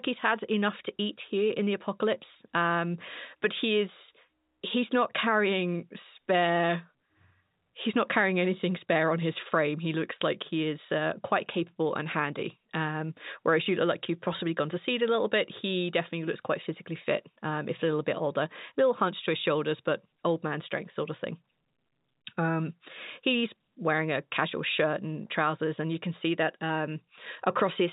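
No faults in the speech; the band stops at 4 kHz, as expected for the G.711 A-law telephone path, which is working as intended.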